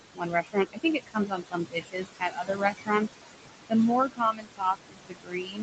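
Across the whole clip the background sinks between phrases and swells back up under them. These are noise suppressor artifacts. The suppressor treats the steady room noise, which sits only about 8 dB below the speech, as something to remove and pushes it down by about 21 dB frame by frame.

From 0.13 to 0.57 s, from 0.73 to 2.91 s, and from 4.13 s to the end, parts of the speech turn faint or swallowed. Soft consonants and word endings drop away. This is speech cut by the noise suppressor. It mistook quieter speech energy for noise and turned it down along with the background, by up to about 22 dB in the first span, about 20 dB in the second and about 22 dB in the last. In total, roughly a third of a second is affected in the first span and about a second and a half in the second.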